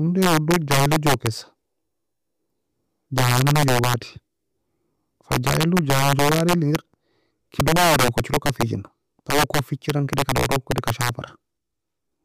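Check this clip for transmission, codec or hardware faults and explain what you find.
The speech has one recurring fault: integer overflow. It hits five stretches: 0.22 to 1.27 s, 3.18 to 3.94 s, 5.32 to 6.76 s, 7.60 to 8.62 s, and 9.30 to 11.09 s. In each, the level is pushed about 4 to 7 dB past full scale. The peaks are not limited. They wrap to the opposite sign and swing across the whole range. The loud parts break into harsh, violent cracks, far sharper than ordinary clipping.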